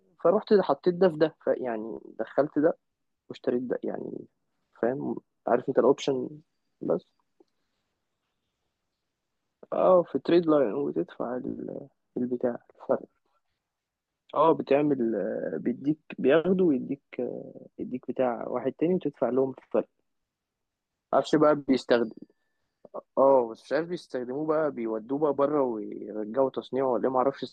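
No technical faults can be heard anywhere in this speech recording.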